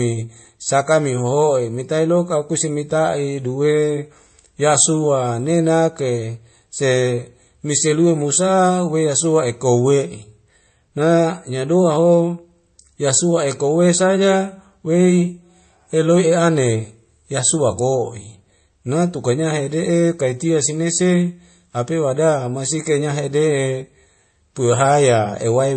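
From start to end the speech stops at 8.3 kHz, and a swirly, smeared low-bitrate texture sits beneath a second, finer layer of coding grain. That stacking, rather than one artefact type, marks transcoding between lossy codecs, likely a very low-bitrate MP3 re-encoded as WMA.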